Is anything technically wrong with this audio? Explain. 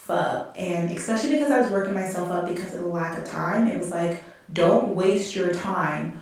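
No, nothing technically wrong can be heard here.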